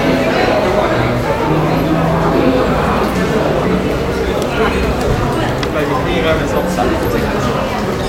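Everyday sounds, with no technical faults to be heard.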